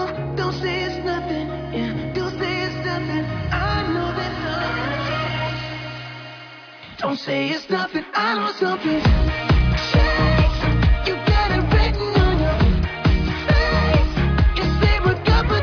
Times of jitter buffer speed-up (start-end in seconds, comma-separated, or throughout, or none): none